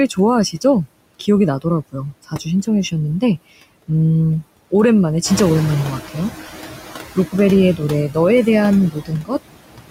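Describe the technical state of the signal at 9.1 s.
At 9.1 s the noise suppressor mistakes part of the speech for noise and cuts it by up to about 18 dB between 8.91 and 9.35 s. The affected sounds come out swallowed and faint. Throughout the clip, the same suppressor also pulls steady noise down by about 21 dB frame by frame, so the noise sinks between the words and rises under them.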